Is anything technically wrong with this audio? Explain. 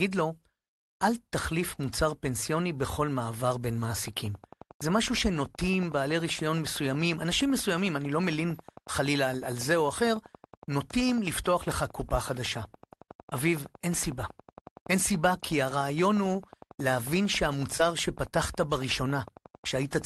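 Yes. Two short concealed packet losses occur, at 17.77–17.81 s and 18.29–18.33 s. Each time about 20 ms of speech, likely one call packet, arrived too late, so the receiver extended the preceding sound and blended back. The result is a brief smeared wobble rather than the silent hole or sharp click of an unconcealed dropout.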